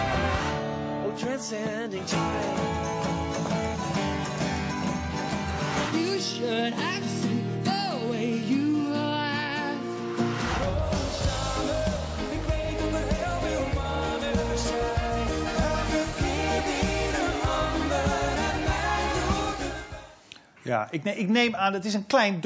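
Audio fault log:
Nothing stood out on listening.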